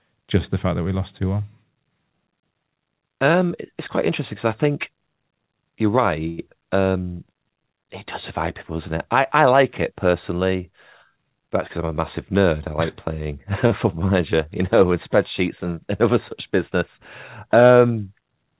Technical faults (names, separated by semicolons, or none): short stall from a late packet; jitter buffer speed-up